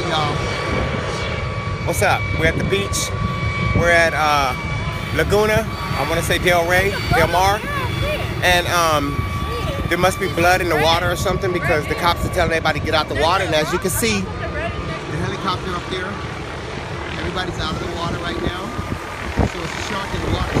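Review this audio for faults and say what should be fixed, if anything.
From 4.92 s to 10.87 s there is crude rate conversion: a gritty, inharmonic fizz trailing the louder and brighter parts, around 20 dB below the signal. The pattern points to a 32 kHz to 44.1 kHz change made by nearest-sample repetition, without interpolation filtering. Prevent it by resampling with a proper band-limited converter.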